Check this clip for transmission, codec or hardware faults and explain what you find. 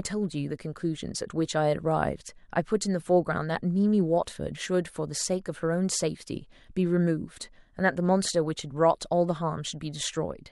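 One codec fault is present, pre-echo at 4.25 s: a hiss about 14 dB up smears 17 ms before a speech attack, because the 26 ms transform block never switched to short blocks. Unlike a click, it is spread noise leading into the onset.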